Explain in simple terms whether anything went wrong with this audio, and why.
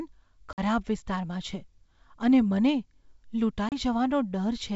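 Packet loss on an ADPCM call hits the speech twice: a gap of about 50 ms starting at 0.53 s, and a shorter one of about 30 ms at 3.69 s. Each time a few small chunks of the call never arrived and were filled with silence, so the sound drops out abruptly. Because the decoder rebuilds each moment from the one before it, it loses track. When the speech comes back it returns slightly distorted until it catches up.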